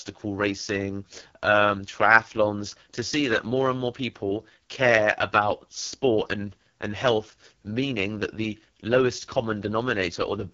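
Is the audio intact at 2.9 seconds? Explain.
No. At 2.9 s, as throughout the clip, the speech carries AMR wideband (HD Voice) codec damage. The rough, raspy texture fits the lowest 6.6 kbit/s mode, whose pulse-driven vocal tract model coarsely approximates the voice. A spectrogram shows a hard ceiling near 6.9 kHz, with smeared, noise-filled detail just below it.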